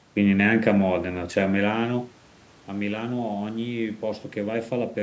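No technical faults in the speech; the level change around 1.5 s is the talker moving relative to the microphone, and the missing bass and nothing above 8 kHz come from the call microphone processing, with the background noise being room noise.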